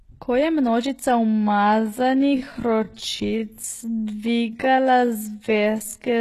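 From the start, the speech has plainly audible HE-AAC compression damage, likely from a very low bitrate, and the sound points to something near 16 kbps. Nothing sits above 12.3 kHz, and the rebuilt treble doesn't match the harmonics below it, so s sounds come out gritty and lispy.

Right after "je množica", at 1.24 s, a time-stretched section begins and runs to the end, where "z nalogami je" sits. Playback drops to roughly half speed while the pitch stays put, likely from stretching software repeating short pieces, so the speech drags.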